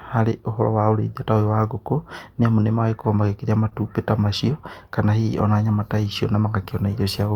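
At 3.69 to 3.73 s the speech briefly hangs, one sound held too long with a faint buzzy dip, though nothing is lost. In this short stall from a late packet, the jitter buffer ran empty and the last sound was stretched to fill 19 ms. Playback then resumed 19 ms later.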